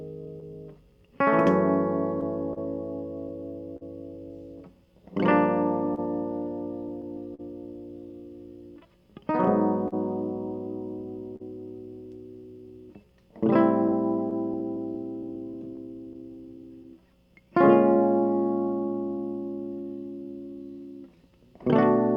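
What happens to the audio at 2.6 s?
Around 2.6 s the music sits inside a cluster of scattered short gaps running from about 2.21 to 3.83 s. A few packets, around three, arrived late or went missing, and the receiver covered each hole by stretching out the last bit of sound it had. The longest patch is around 40 ms, with roughly 70 ms filled in total.

That moment also falls within a longer stretch of repeated timing corrections, from about 0.26 to 21.32 s. The receiver keeps slipping in tiny repeated slices to hold its place, so playback runs at about 99% speed and picks up roughly a third of a second over the whole stretch. Each edit is tiny and unevenly spaced. At 2.6 s you'd hear at most a faint stumble or a slightly wobbly sense of tempo.

Underneath both of those is clock drift between sender and receiver. The sender's clock runs about 3% slow compared with the receiver's, so the jitter buffer keeps running low. 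That is what forces the constant padding.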